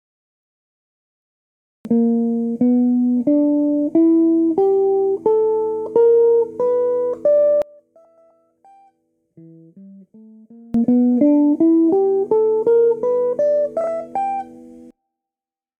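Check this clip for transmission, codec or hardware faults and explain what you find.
Three kinds of fault are present: a late start, a stretch where the summed level collapses, and two brief spots of reordered audio.

The cut-off start comes from recording or streaming that began late. The file holds digital silence from 0.0 to 1.85 s, and at 1.85 s the audio jumps in mid-sound, with no natural attack or fade-in and an abrupt edge where it begins.

From 7.62 to 10.74 s the level falls by about 28 dB. This is likely one channel inverted: when a stereo channel with flipped polarity is summed to mono, the content shared by both channels cancels. Only a faint residue of the difference between the channels survives until the level returns.

Frames out of order occur twice. In each case two adjacent blocks of audio were decoded in swapped order. From 8.05 to 8.31 s the two halves are each 128 ms long. 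At 13.81 to 13.87 s they are each 32 ms. Each stretch plays with its halves exchanged, giving a garbled flutter. No time is lost. The first instance falls inside the low-level stretch, so it is heard faintly.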